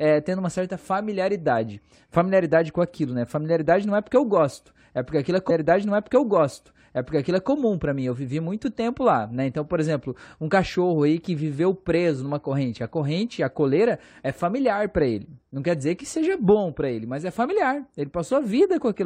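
At 5.49 s, just after "porque aquilo é", a stream segment repeated. About two seconds of the speech, 2.0 s in all, plays a second time, ending at 7.49 s before "para mim" follows. The player fetched or queued the same chunk of the stream twice. It sounds like the talk jumps backward. A small blip marks the jump. The repeated stretch adds time without adding anything new.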